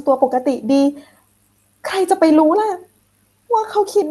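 Throughout the speech, clock drift between sender and receiver is present: the sender's clock runs around four percent fast, so the receiver's jitter buffer steadily overfills. From 0.09 to 4.03 s, repeated timing corrections follow, as the receiver trims short pieces to keep pace, running near 105 percent speed. This sits on top of an Opus call path whose top end stops near 12 kHz.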